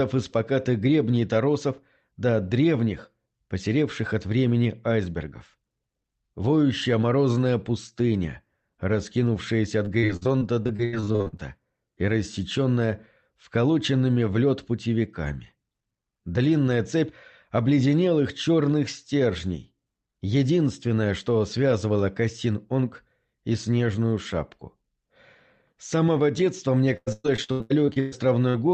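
Audio carried over a call path, its top end stopping around 8 kHz, which fits a wideband call codec, has two bursts of repeated packet loss that give it a robotic sound. From 9.85 to 11.41 s, well over a dozen short holes, the longest 76 ms, are patched by extending the preceding sound, so about a third of that stretch is synthetic and sounds choppy. From 26.97 to 28.14 s the loss is heavier, with fewer but longer holes, up to about 0.12 s, and half the span concealed. What sets these apart from a single glitch is the rapid succession of fills, which makes the sound choppy rather than simply drop out. Just after, at 28.50 to 28.56 s, a short concealed packet loss of 40 ms appears as one isolated smear or wobble. It is a single patched hole, not a run of them, so the sound wobbles once and carries on without the sustained robotic texture.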